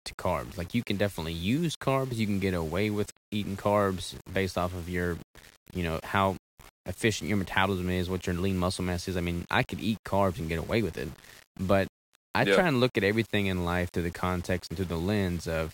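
The whole recording, a speech clip, has a gritty, grainy edge from start to finish, most obvious on quiet passages and word tails, where the sound breaks up and sputters toward silence. That's the classic sound of low bit depth without dither: the error tracks the signal rather than sitting as steady hiss, roughly 25 dB below it. The likely cause is rounding to something like 7 bits with no dither applied.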